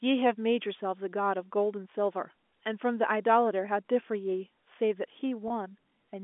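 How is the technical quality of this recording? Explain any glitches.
There is one glitch in this telephone-band speech recording, near the end.

Packet loss with pitch repetition, from 5.48 to 5.50 s: about 20 ms of audio went missing, a gap that points to a single lost packet. To cover it, the receiver repeated the last pitch period of the speech and faded that copy out, then blended back into the real signal. Because the gap is so short, it comes across as a brief held, slightly buzzy moment rather than a dropout. The G.711 A-law line coding carries the speech at 64 kbps within roughly 250 Hz to 3.5 kHz, with any codec noise faint.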